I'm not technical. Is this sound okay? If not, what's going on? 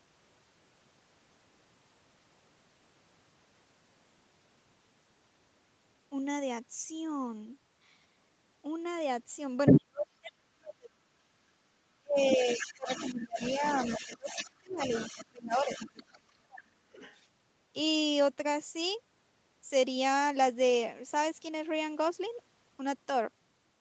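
No. There are two related problems, both in the middle of the clip.

The first is the other side's voice leaking through. A second voice can be heard at 9.66 to 10.32 s, where it is actually louder than the main talker, then more faintly from 12.29 to 16.05 s, and very faintly from 16.99 to 17.17 s. The likely cause is that the talker's device played the other person over its loudspeaker, and the echo canceller, the part meant to remove that sound from the microphone, did not remove all of it.

The second is speech suppressed in double talk. From 9.71 to 11.32 s and again from 12.02 to 17.0 s, the main voice drops sharply, nearly to silence at its worst, in pieces adding up to roughly one and a half seconds and three seconds. This likely happened because both people spoke at once, and the echo canceller, unable to tell the talker from the echo, turned everything down.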